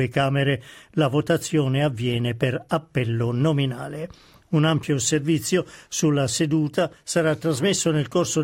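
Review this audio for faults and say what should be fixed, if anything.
Nothing stood out on listening, so there is nothing here that calls for a fix.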